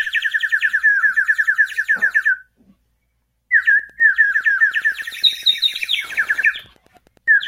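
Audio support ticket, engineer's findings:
Wi-Fi interference, 3.70 s to end: faint ticking every 102.4 ms, well below the sound. Nearby radio beacon rectified by the input stage. Ten-per-second rhythm separates it from GSM buzz.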